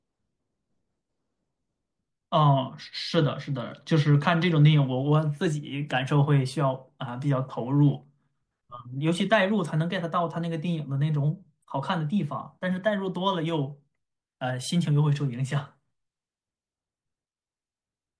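No technical faults occur at any point in the speech recording, so there is nothing to describe in time order.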